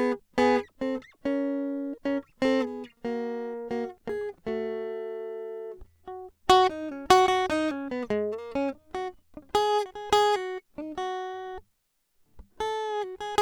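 It's a music clip, and there's nothing technically wrong to point to anywhere in it.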